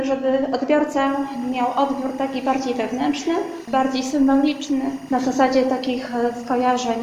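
From 1.07 s on, there's timecode bleed: 24 fps code leaking in from a nearby line, a faint warble flipping between roughly 1 and 2 kHz.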